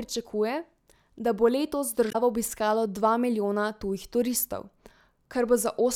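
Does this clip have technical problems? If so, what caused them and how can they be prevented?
Yes. At 2.08 to 2.15 s, just after "da bo letos" and before "obiskalo dva milijona tujih", the speech breaks into a brief glitch. This is damaged data in a compressed stream: corrupted bytes make the decoder misread frames, lose sync and jump to the next valid header. Preventing it means checksumming files and using reliable, error-checked transfer and storage.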